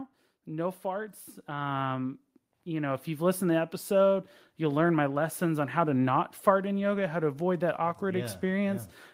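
From 0.45 s to 3.5 s the automatic gain rises. The gain control judged the input too quiet and pushed its level up by about 10 dB. Speech and background swell together, slowly, until it settles just before "to the episode you'll".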